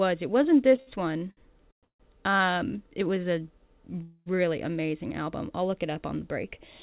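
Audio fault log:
0.76–2.42 s, repeated stalls (stutter): The audio drags and hiccups through this stretch. It catches six times, with the last sound held and smeared forward each time, the longest hold lasting 148 ms. Concealment covers 435 ms, about a quarter of the span, yet nothing is lost and the sound resumes where it left off. Packets were arriving late or slower than playback, so the jitter buffer kept draining and the receiver padded each wait by continuing the previous sound.
4.02–4.28 s, call audio freeze: A single hold, with the last sound stretched out as a fading buzz or hiss for 234 ms, ending in a brief 10 ms of silence before the audio picks up exactly where it stopped. Nothing is missing, but everything after this point now runs 234 ms later. The likely cause is packets held up in transit, emptying the jitter buffer while the receiver filled the gap. Throughout, nothing sounds above 4 kHz, which points to a narrowband call codec such as G.711.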